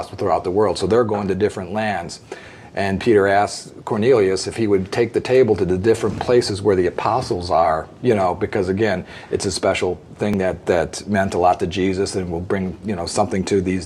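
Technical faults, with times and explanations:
10.34 s, overlap between stream segments: two segments claim the same stretch of time, so about 17 ms is cut away and the waveform jumps audibly.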